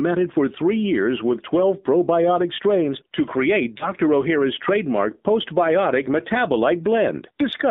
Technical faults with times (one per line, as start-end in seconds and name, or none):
0.00-7.71 AMR narrowband mobile codec
3.78-3.87 lost AMR speech frames